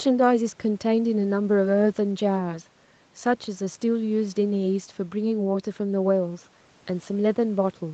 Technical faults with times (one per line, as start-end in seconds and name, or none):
none